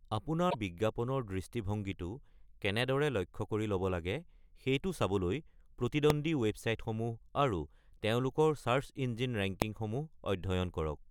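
At 0.49 to 0.55 s, just before "বিজ্ঞাপনৰ দৃষ্টিভংগীটো কেনেদৰে লক্ষ্য", the speech jumps ahead and a couple of 24 ms frames come out garbled, likely a broken MP3 bit reservoir. Frames that borrowed data from earlier ones found the wrong bytes after a cut. On a spectrogram this shows as a brief smeared or empty patch breaking the harmonics.

At 6.10 s and 9.62 s, invalid numbers at full scale produce single sharp bangs. In each case a 0.67 ms block, about 32 samples, was forced to an extreme value. The waveform shows a narrow flat spike far beyond the speech peaks, and the spectrogram shows a thin vertical broadband line.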